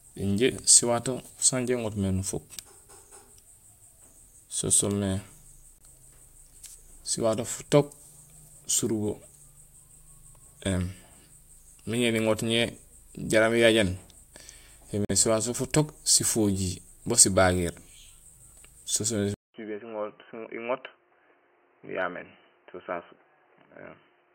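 At 5.78 to 5.82 s and again at 15.05 to 15.11 s, corrupt frames were muted: bits in the compressed stream were damaged, the decoder rejected the affected frames, and the player substituted silence. Each gap is short enough to fit about two frames. The audio drops out abruptly and resumes on time, leaving a small hole.

From 19.34 s to the end, the input was likely switched to a poorer device. After a silence of about 200 ms, the speech comes back roughly 10 dB quieter and confined to below 3 kHz, so it sounds dull and boxy. The new device also brings its own background noise, sitting about 30 dB under the voice.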